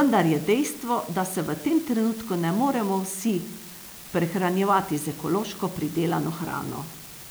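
A marginal data line leaves one bit flipping at random across the whole speech clip, so scattered samples jump by a fixed step of about -32 dBFS. This unreliable data bit produces a steady crackling fizz that runs under the speech and carries on through the pauses.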